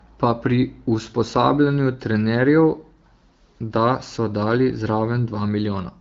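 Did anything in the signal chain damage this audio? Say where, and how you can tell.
No, nothing in the chain damages this speech. It goes through an AMR wideband (HD Voice) codec at 12.65 kbit/s, which leaves only the light coloration expected at that rate, with the top band above 6.4 kHz filled by shaped noise.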